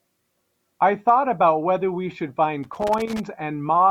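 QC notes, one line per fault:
2.63–3.20 s, loose connector crackle: an irregular burst of scratchy crackle over the speech, from a worn contact making and breaking, chopping the signal.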